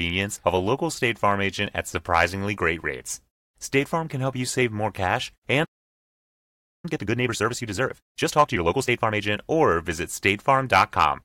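At 5.64 s the speech cuts off mid-flow in a playback stall, silent for 1.19 s until 6.85 s, likely the player starving or blocking; the waveform shows a flat gap, the spectrogram a blank band. From 6.85 to 9.23 s a time-compressed catch-up hurries speech at 1.5 times speed, normal pitch, with compressed spectrogram patterns and regularly spliced waveform.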